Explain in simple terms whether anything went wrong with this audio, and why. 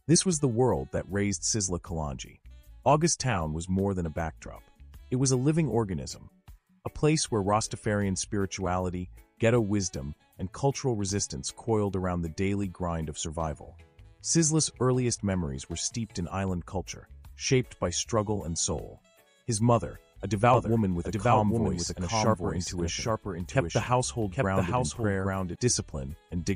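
From 20.54 to 25.56 s there is a doubled audio track: a quieter copy trails about 0.7 s behind, likely from a second capture or an edit. Unlike an echo, it has no fading tail or room sound and starts and stops abruptly.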